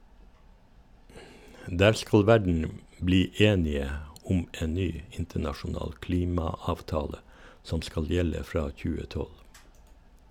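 Listening through the speech, nothing stood out as a technical fault at any point.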